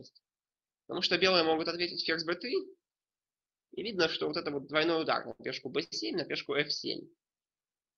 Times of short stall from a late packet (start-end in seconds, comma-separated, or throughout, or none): 5.31-5.41, 5.83-5.94